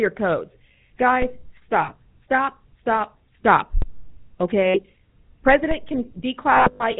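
Throughout, the speech has a buzzy, gravelly roughness and nothing above 4 kHz, which fits the 13 kbps GSM full-rate codec rebuilding the voice from coarse pulse excitation.

At 1.82 to 1.90 s a brief metallic ring holds the sound for about 60 ms. These are lost GSM frames, patched by repeating the last good frame.

At 3.82 s a low thump sounds while the speech carries on. This is a DC step: the waveform's zero line jumps, then the offset decays.

At 4.66 to 4.79 s the same rough ring returns for about 80 ms, again from lost GSM frames being filled from the last good frame.

From 6.52 to 6.84 s the ringing breaks up repeatedly over about 280 ms. Here lost GSM frames total about 240 ms, and the longest gap runs roughly 150 ms.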